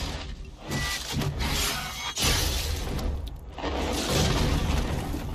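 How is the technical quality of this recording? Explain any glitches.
No glitches, dropouts or distortion are audible anywhere in the recording.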